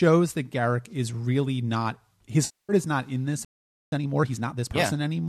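At 2.45 s the speech turns smeared and noisy for about a quarter of a second, to 2.72 s. This is AAC frame loss with concealment. Around 240 ms of coded audio never reached the decoder, which fits a run of about two dozen short low-delay frames. The decoder rebuilt the gap from the last good spectrum, reshuffling its phases. The result is a hazy, phasey patch where clear speech should be.

At 3.45 s the sound simply stops. Silence holds until 3.92 s, close to half a second. This is a playback stall. The player most likely ran short of data and had nothing to send to the output. No fade or blur marks the gap. The speech cuts out in mid-flow and then resumes, which is what a starved output buffer sounds like.

From 3.92 s to 4.86 s the speech runs hurried, at about 1.5 times normal speed. This is time-compressed catch-up. Having fallen behind during the stall, the player trims its backlog by dropping small slices and cross-fading the joins. 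Pitch stays put, so the speech sounds rushed rather than squeaky. It rides over the light graininess the low-delay AAC coding likely leaves throughout.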